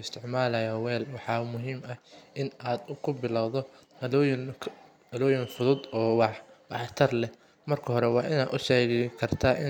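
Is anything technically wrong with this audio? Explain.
No, the signal shows no technical faults at any point in the recording.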